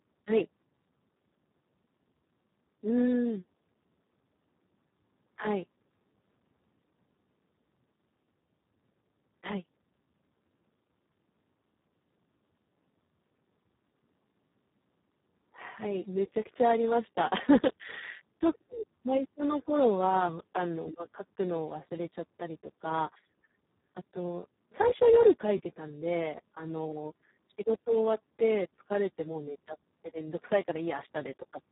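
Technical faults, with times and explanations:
Throughout, Speex codec: the speech sounds hoarse, buzzy and robotic, with nothing above 3.8 kHz. Damage this heavy points to a very low setting near 4 kbps, where too few bits remain for the excitation, so the codec behaves almost like a vocoder.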